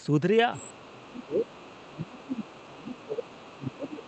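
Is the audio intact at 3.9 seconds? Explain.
No. From 1.87 s to the end, the speech is pushed down by up to about 25 dB. This is likely speech suppressed in double talk, with the echo canceller ducking everything. From 2.36 s onward, a faint second voice sits about 25 dB below the talker. This is likely the other side's voice leaking through as residual loudspeaker echo.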